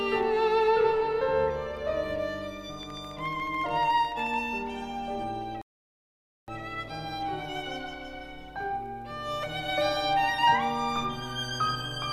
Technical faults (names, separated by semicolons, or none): train of clicks; rebuffering stall